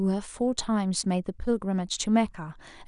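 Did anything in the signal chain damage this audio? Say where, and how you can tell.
No, nothing in the signal chain has left audible damage on this speech. Listening stage by stage from wiring through to playback, none of them leaves a trace that can be heard.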